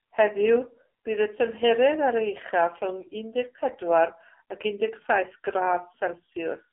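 Throughout, heavy AMR narrowband mobile codec damage: nothing above 3.8 kHz, and buzzy, synthetic speech that fits a low 5.9 kbps mode.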